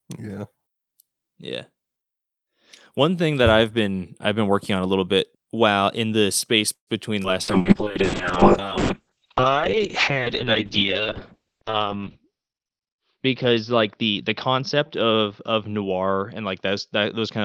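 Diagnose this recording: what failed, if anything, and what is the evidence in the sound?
Network stage, most likely a delivery stall: packets were held back and the jitter buffer ran dry. From 6.73 to 6.90 s the speech stops, the last sound trails off into about 100 ms of silence, and then it resumes where it left off. That inserts 137 ms of delay and loses nothing.

Network and jitter buffer: a skip ahead at 7.23 s. A stretch of audio was dropped while later audio was already waiting. Around 70 ms of speech is gone, bridged by only about 10 ms, so the two sides butt together almost directly.

Network: a burst of packet loss from 7.42 to 7.50 s. Consecutive packets never arrived in time. The receiver extended the last sound for 54 ms as a fading buzz or hiss, then jumped on, leaving 60 ms of speech missing.

Codec: a call bitrate drop starting at 7.43 s and lasting to the end. The bandwidth estimate collapsed and Opus was pushed from 48 to 6 kbps, with audio bandwidth cut from 20 kHz to 6 kHz. 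For 4.68 s at the lowest rate the speech sounds muffled, rough and watery.

Jitter buffer: a slow-down from 7.58 to 7.89 s. To rebuild its reserve, the buffer repeated pitch periods and pause fragments, adding 41 ms. Speech runs at 90% speed with unchanged pitch, so sounds are drawn out.

Jitter buffer: a speed-up from 11.77 to 13.18 s. The buffer held more audio than its target and trimmed short pitch-period slices, about 150 ms in total. Speech runs at 110% speed with the same pitch and sounds noticeably hurried.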